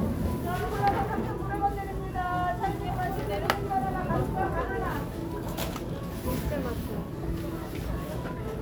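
No technical faults are audible.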